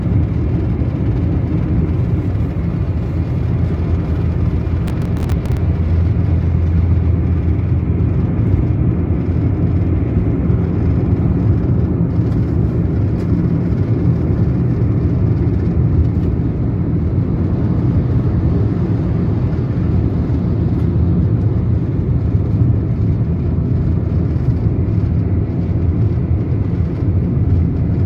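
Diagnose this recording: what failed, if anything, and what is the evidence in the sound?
A burst of gritty crackle tears through the sound from 4.88 to 5.57 s, then stops cleanly. This is processor overload crackle at the driver or buffer stage: around twenty buffers of a few milliseconds each missed their deadlines, each leaving a hard-edged sliver of silence.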